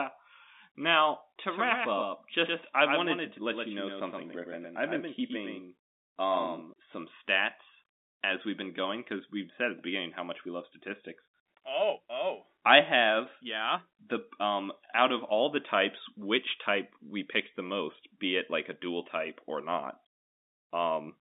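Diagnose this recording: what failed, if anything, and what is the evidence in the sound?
From 1.49 s to 6.73 s there's a doubled audio track. A second full-band copy of the speech trails the original by around a tenth of a second, only about 5 dB quieter, with no decay or room colour, and it cuts in and out abruptly at both ends. That points most likely to a second, slower capture path or an edit that left two out-of-step copies mixed together.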